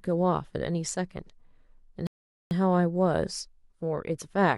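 A speech recording with a rebuffering stall: at 2.07 s the audio falls to silence and stays there until 2.51 s, adding about 0.44 s to the running time. The player has exhausted its downloaded data and waits for more. Unlike a dropout, where a chunk of sound vanishes and the speech jumps ahead, here nothing is skipped. When playback returns, the speech carries on from exactly the point where it stopped.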